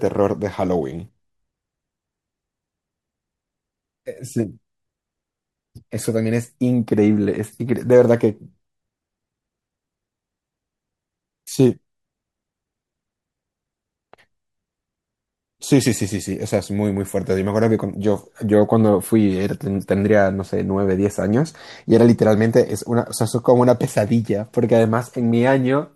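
Speech, with nothing technically wrong with it.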